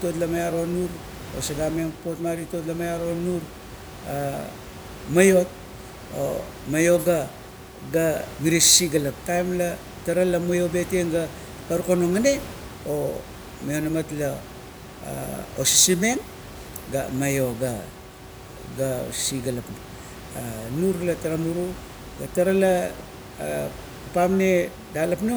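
No technical faults can be heard anywhere in this recording.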